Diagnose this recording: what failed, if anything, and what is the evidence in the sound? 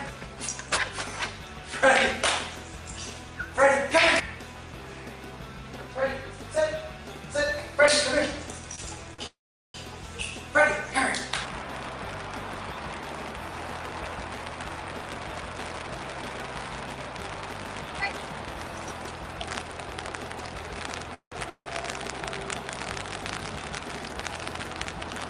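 Short stalls from late packets occur at the network and jitter buffer stage, at 8.75–8.80 s and 9.14–9.20 s. The last sound is held for 24 ms and then 45 ms, with a slight buzz or dip, and resumes without loss. Unlike a freeze, nothing decays into silence.

A call audio freeze occurs at 9.26–9.76 s, 21.14–21.34 s and 21.50–21.68 s. The sound continues as a fading buzz or hiss and then goes silent for 390 ms, 100 ms and 70 ms before resuming in place. The likely cause is network delay emptying the jitter buffer. The silent tail distinguishes these from the brief stalls.

Jitter buffer speed-up occurs at 13.48–18.27 s, which runs 5% fast and removes about a fifth of a second, and at 23.62–24.31 s, which runs 9% fast and removes under a tenth of a second. Pitch-period trimming hurries the audio without raising its pitch, unlike a sample-rate error.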